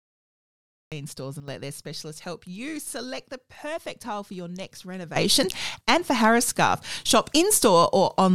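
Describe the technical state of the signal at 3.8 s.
At 3.8 s the speech signal is intact, with no audible fault at that moment.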